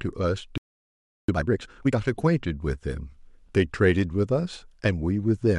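At 0.58 s the speech cuts to silence for about 0.71 s, resuming at 1.29 s: a playback stall, likely the player starving for data or blocked. From 1.29 to 1.99 s, time-compressed catch-up plays the backlog at twice normal speed, cross-fading out small slices, so speech sounds hurried at unchanged pitch.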